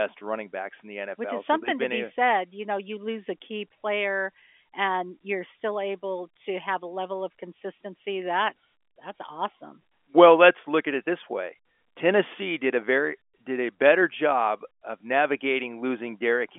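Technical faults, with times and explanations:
No technical faults are audible anywhere in this recording.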